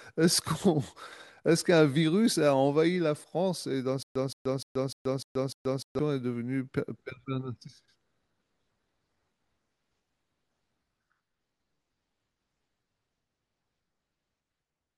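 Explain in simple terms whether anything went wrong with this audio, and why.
From about 4.03 to 5.99 seconds, the speech catches on itself: a short scrap of sound, roughly 0.17 seconds long, plays, then cuts to complete silence for about 0.13 seconds, and this repeats six times at a steady beat of about 0.3 seconds. This is a stutter with silent gaps. The likely cause is that playback stalled, and each time it tried to recover it replayed the last bit it had before running dry. Whatever should have been heard during that stretch is missing.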